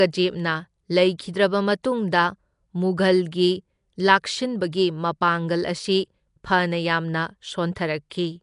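Throughout, the speech carries a rough, hissy halo and a smeared, underwater tone, likely Nellymoser compression; the spectrogram shows empty bands filled with noise and nothing above 10.6 kHz.

At 1.83 s, pre-echo adds about 11 ms of hiss just before a sharp onset, visible as noise smeared ahead of the attack in the waveform and spectrogram.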